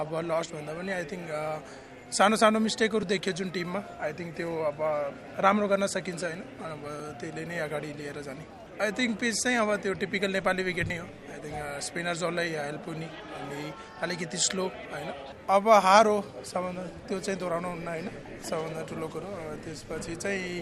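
At 3.03 s, 7.00 s and 10.90 s the sound jumps forward, skipping about 20 ms, 20 ms and then roughly 70 ms, likely a dropped buffer (overrun). Unread samples were overwritten, so the edges splice directly, with no silent gap as in a dropout.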